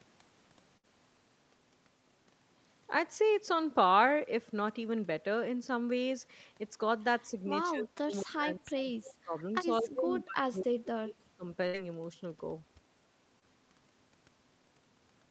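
Speech recorded through a call, with several distinct faults. A burst of packet loss hits at 0.77 to 0.85 s and again at 11.67 to 11.75 s. In each case about 60 ms of audio never arrives, and the receiver stretches the last sound to cover the hole while fading it down. You hear a short held buzz or hiss before the speech jumps ahead with a piece missing. On a spectrogram this shows as harmonics frozen flat and dimming. In the waveform it is a decaying, unnaturally regular stretch followed by an abrupt splice. Speech suppressed in double talk affects 7.71 to 9.54 s and 9.81 to 11.45 s, with about a second and a half of each span audibly damaged. The voice ducks by as much as roughly 30 dB, thins out or drops in fragments. This is likely the echo canceller clamping down while both ends talked at once. The waveform envelope collapses in irregular chunks, and the spectrogram shows the upper bands vanishing first and energy going patchy. 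Inside the second of those spans, at 10.20 to 10.24 s, there is a brief echo leak. A faint copy of the voice about 225 ms late and about 20 dB down slips through, likely residual loudspeaker pickup that the echo canceller missed. It appears as a weak ghost of earlier harmonic patterns, offset in time, too small to stand out in the waveform. Finally, a short concealed packet loss at 13.39 to 13.44 s replaces about 20 ms with synthesized continuation, giving a momentary smear or wobble. It shows as a thin blurred column in the spectrogram and a slight kink in the waveform. All of this sits within a spectrum that stops at 8 kHz, as expected for this call path.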